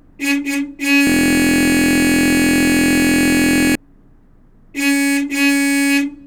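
From 1.07 s to 3.75 s the playback system hangs while the audio hardware keeps cycling through its ring buffer: a system hang loop. The same 23.22 ms slice of audio repeats exactly, over a hundred times in a row, which fits a 1024-sample buffer. Because the loop is so short, it sounds like a steady buzz at about 43.1 Hz in place of the actual sound for nearly three seconds.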